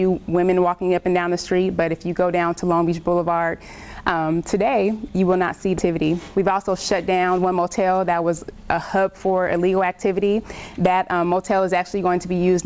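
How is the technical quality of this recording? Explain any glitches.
The recording has two glitches close together, just under the 6-second mark, heard against a call-quality signal with nothing above 8 kHz, which fits a wideband call codec such as G.722.

Skip ahead, at 5.78 s: playback jumps forward with no gap filled, so roughly 0.7 s of audio is simply missing. That stretch was dropped while later audio was already queued, leaving the two sides of the jump joined almost directly.

Jitter buffer speed-up, from 5.88 to 7.55 s: the buffer still held more audio than its target, so it trimmed short pitch-period pieces repeatedly, about 150 ms in total. The sound runs at 107% speed at unchanged pitch and comes across slightly hurried.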